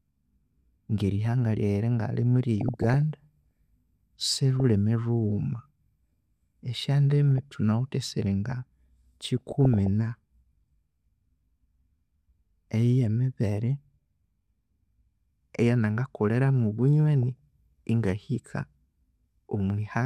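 Speech with short noise blips at 2.61–3.14, 4.33–4.60, 7.38–7.56, 9.26–9.87 and 17.23 s. This is DAB burbling: weak reception lets a fraction of a percent of bit errors corrupt sub-band levels for single frames.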